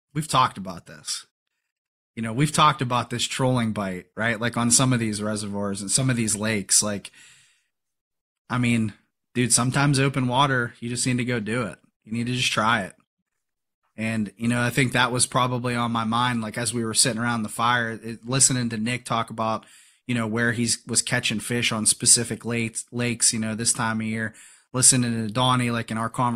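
No technical faults can be heard anywhere in the recording; the speech signal stays intact and continuous throughout.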